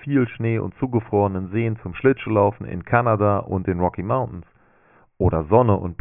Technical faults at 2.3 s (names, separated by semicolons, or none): none